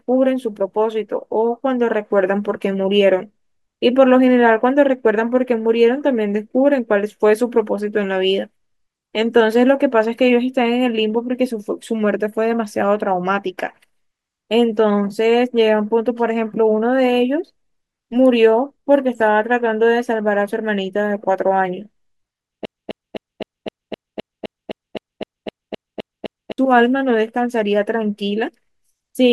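A speech clip with a broken-record loop from 22.65 to 26.58 s: one 0.26 s fragment repeats exactly, back to back, 15 times. Unlike a buffering stutter, the speech doesn't resume late. That span is lost, likely from a stalled stream resending its last fragment.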